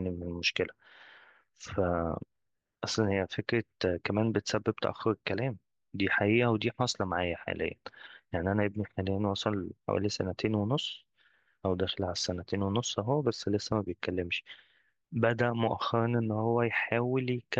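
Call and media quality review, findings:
Nothing stood out on listening to the speech in this clip, with no audible problem anywhere along the call or media path.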